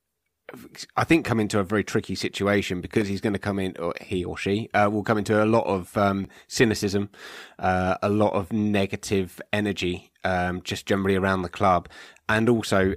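Two brief ticks interrupt this speech recording: one at 3.01 s, right after "a very tricky situation", and one at 6.25 s, after "into a lot of". Each is a block of digital silence, about 3.25 ms and 5.33 ms long. The sound cuts out and returns with no fade. The second gap fits a 256-sample buffer that went unfilled in time.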